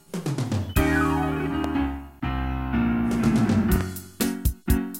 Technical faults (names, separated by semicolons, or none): loud pop